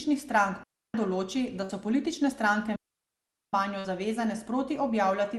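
At 0.63 s a digital wireless dropout mutes the speech for about 0.31 s. The receiver lost too much data. It cuts to clean silence, with no noise burst.

At 1.63 s a burst of packet loss hits. The last sound is stretched for 57 ms as a fading buzz or hiss. Then 60 ms of speech is skipped.

At 2.76 s a second dropout mutes the audio for about 0.77 s, again a clean hole.

At 3.79 s another burst of packet loss fills 52 ms and skips 60 ms.

The call codec limits the audio to about 12 kHz, which fits Opus.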